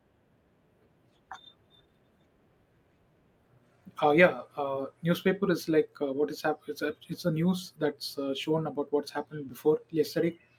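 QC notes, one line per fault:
No faults found in the speech clip. Nothing here calls for a QC entry.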